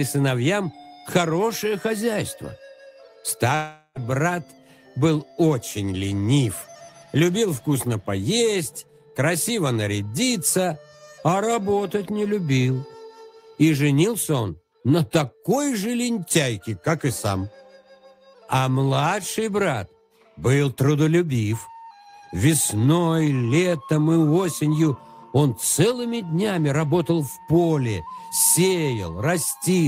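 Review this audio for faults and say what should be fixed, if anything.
From 3.55 to 3.99 s the sound turns into a fading buzz for about 0.4 s, drops to a 30 ms silence, then resumes with about 0.4 s skipped. This is likely a long network dropout: no data arrived, so the receiver extended the last sound until it ran out. A more stable network path, forward error correction or a deeper jitter buffer would prevent it.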